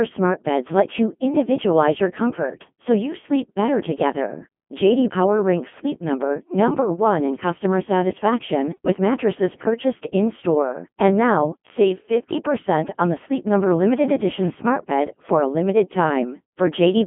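Speech run through a Codec 2 vocoder the whole way: robotic, buzzy sine-wave resynthesis, which fits about 2.4 kbit/s, and heavy damage with nothing above 3.5 kHz.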